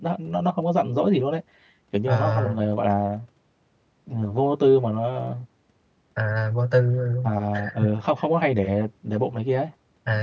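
Speech that sounds hollow and phasey throughout, from channel delay (comb filtering): one channel runs roughly 10 ms late, so the mono sum cancels at evenly spaced notches starting near 50 Hz.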